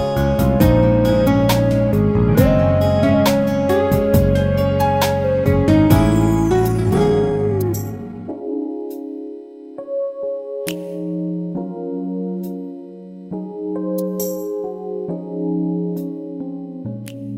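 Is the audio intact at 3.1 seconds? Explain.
Yes, the audio is intact at 3.1 seconds, with no dropout, click, distortion or other fault at that moment.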